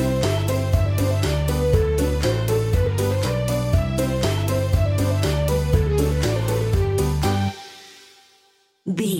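No technical faults are audible.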